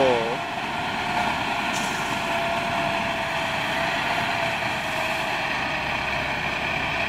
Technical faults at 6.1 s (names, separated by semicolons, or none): none